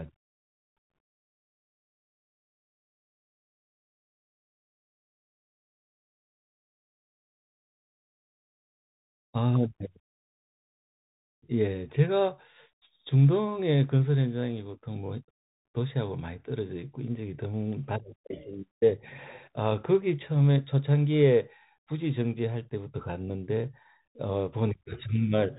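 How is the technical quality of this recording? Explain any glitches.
The technical quality is poor: the whole recording carries plainly audible damage from a Bluetooth CVSD headset codec. From start to finish, speech is squeezed below about 4 kHz. The coder sends one up-or-down bit per sample with an adapting step, which fits a 64 kbit/s stream. Loud, bright passages outrun the step and distort, and s sounds turn scratchy over a granular hiss. That hiss and slope distortion set it apart from a simple low-pass filter.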